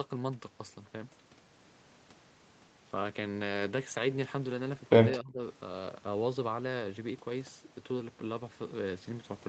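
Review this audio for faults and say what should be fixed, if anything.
Between 5.18 and 5.41 s the speech dips sharply, by roughly 20 dB at its deepest, for about 200 ms in total before recovering. This is most likely speech suppressed in double talk: with both ends active, the echo canceller could not tell the near talker from loudspeaker echo and attenuated everything. The band limit at 8 kHz comes from the Opus call path. To prevent the dip, tune the echo canceller's double-talk detection so near-end speech is not suppressed while the far end is active.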